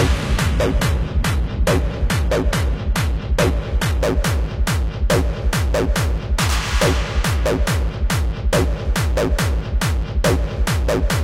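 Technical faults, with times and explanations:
0.0–4.0 s, adaptive stream starting at a low bitrate: thin, synthetic treble and stronger codec artefacts, then a sudden gapless jump in clarity. This fits a player starting near 20 kbit/s HE-AAC before switching to a fuller AAC stream.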